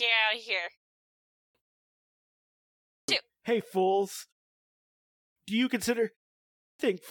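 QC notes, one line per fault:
1.20 s (after "of here"), 2.76 s, 4.98 s and 6.45 s (after "you consider"), clipped start after a pause: speech begins abruptly with its first 0.32 to 0.38 s missing, because the output device has gone to sleep during the preceding silence and wakes too slowly.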